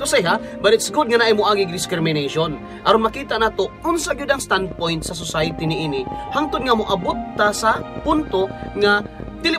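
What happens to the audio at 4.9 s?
At 4.9 s a train of clicks is under way, running from 4.39 to 9.46 s: about ten unevenly spaced pops per second, likely from interference, rising slightly above the sound, unlike random vinyl-style crackle.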